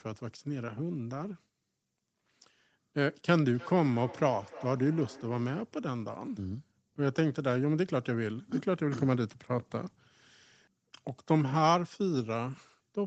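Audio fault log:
3.42–5.82 s, feedback echo between two devices: the speech returns at a fixed interval of about a third of a second, peaking at about 17 dB below the direct sound. A second device in the room is replaying this microphone's signal, which the microphone picks up again, and neither echo canceller removes sound played by the other device.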